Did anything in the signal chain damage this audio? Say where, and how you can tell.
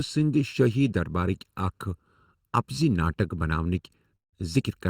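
Yes. Channel delay (comb filtering) runs through the whole speech clip, likely introduced where the two channels are summed to mono. One side arrives a fraction of a millisecond late, so combining them cancels content at evenly spaced frequencies, the first notch sitting somewhere around 700 Hz with further notches above it. That is why the speech sounds hollow and phasey. The notches stay fixed in place from start to end.

Call audio freeze appears from 4.15 to 4.35 s, and the likely cause is a network stall that drained the jitter buffer. The receiver stretches the last sound into a short fading buzz or hiss, then drops to silence for most of the roughly 170 ms gap. When packets resume, the speech continues exactly where it stopped. Nothing is lost; the audio is simply pushed later by about the length of the stall.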